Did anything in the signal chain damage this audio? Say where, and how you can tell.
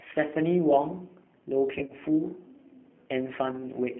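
Yes. At the codec stage, the entire clip carries G.729 coding at 8 kbit/s. The speech sounds rough and synthetic and is confined to a telephone band of about 200 Hz to 3.4 kHz. A spectrogram shows a hard ceiling near 3.4 kHz and grainy, pulse-built harmonics from frame-by-frame reconstruction.

At the network stage, VoIP packet loss concealed by the speech codec appears at 1.79–1.93 s and 3.52–3.64 s. The decoder stretched its last pitch and filter at falling gain, so the speech turns into a buzzy tone or coloured noise, fades, then recovers sluggishly. In the waveform these spots look like decaying stretches. The first burst is spread over 100 ms, with its longest gap at 30 ms. The second has gaps of 10 ms at most.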